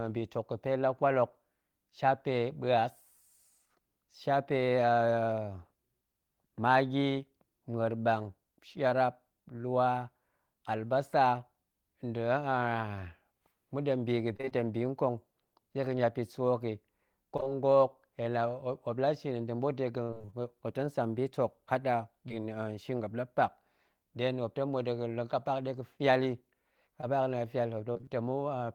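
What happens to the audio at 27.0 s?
A brief smear from 27.01 to 27.05 s is short concealed packet loss: about 20 ms of speech arrived too late, and the receiver extended the preceding sound before blending back.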